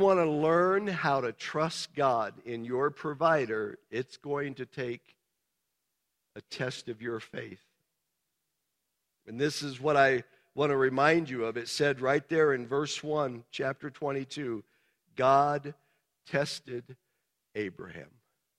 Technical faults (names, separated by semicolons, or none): none